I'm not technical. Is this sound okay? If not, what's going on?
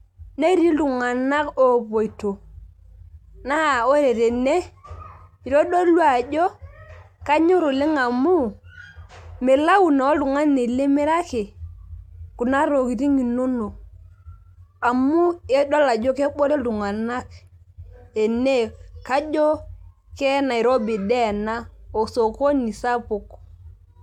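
No. Two kinds of fault are audible.

Compressed frames skipped: the player lost or rejected small chunks of the compressed file. At 6.46 to 6.48 s about 50 ms of sound is missing, and at 16.70 s about 20 ms. Each gap fits whole frames of roughly 23 ms. You hear a brief glitch where the sound jumps ahead.

Dropped samples: at 19.34 s and 23.26 s there is a single sharp click. It is likely caused by a handful of tiny sound values going missing, far too few to remove anything audible. The sound simply snaps abruptly from one point to the next.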